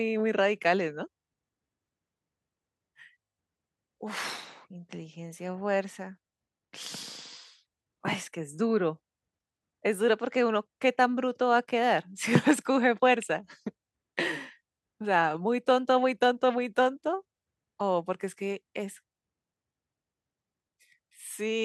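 No technical faults can be heard anywhere in the recording.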